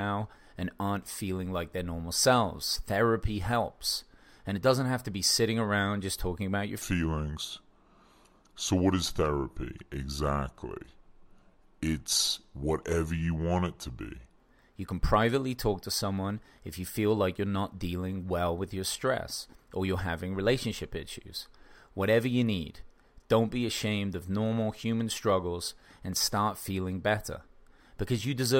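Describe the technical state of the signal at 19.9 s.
At 19.9 s the speech signal is intact, with no audible technical fault at that moment.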